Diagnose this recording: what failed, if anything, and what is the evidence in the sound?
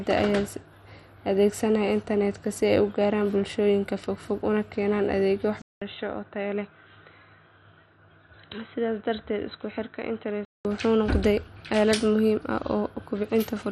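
Throughout the speech the top end is dull and stops near 13.6 kHz, with a granular, gurgling edge. This is the codec stage: likely MP2 compression, whose starved upper sub-bands are switched off and coarsely quantised, which fits a 64 kbps stream.

From 5.62 s, after a 200 ms silence, the speech turns boxy, nothing above 4 kHz, roughly 5 dB quieter over a new faint noise floor, until 10.65 s. At the input or driver stage the system likely switched to a poorer device, a narrowband microphone or headset call profile.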